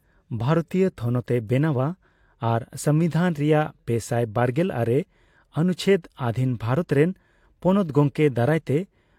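Nothing here stands out as a technical fault; the speech just runs along as recorded, with no glitches to point to at any moment.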